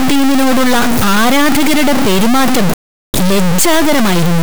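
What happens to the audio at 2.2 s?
At 2.2 s, as throughout, there is harsh buzzy distortion, likely a stuck bit weighing around -5 dBFS. The waveform jumps in large steps, and the spectrogram smears broadband.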